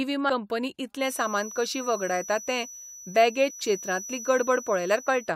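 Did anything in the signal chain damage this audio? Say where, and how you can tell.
Yes. At about 0.29 s and again from 3.49 to 3.51 s there is damaged data in a compressed stream, a codec or storage fault. Each is a brief disturbance as the decoder loses sync and hunts for the next frame header.

From 0.95 s to the end, a thin, steady feedback whistle at 5.9 kHz sits about 15 dB below the sound, swelling and fading slowly in level. The likely cause is a loudspeaker-to-microphone loop held just short of runaway. Unlike mains hum, it is one high tone with no low harmonics.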